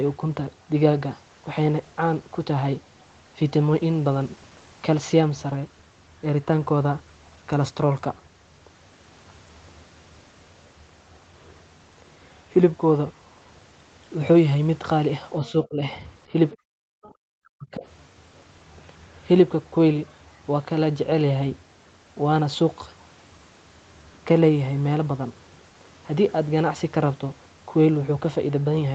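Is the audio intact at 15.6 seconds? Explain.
No. From 15.4 to 15.85 s the speech dips sharply, falling by about 20 dB at its deepest, with around 0.4 s affected in total. This is speech suppressed in double talk. The likely cause is an echo canceller that could not tell this talker apart from loudspeaker echo while both sides spoke, so it turned everything down. Packet loss would instead leave hard gaps or smeared concealment artefacts. Here the level is ducked.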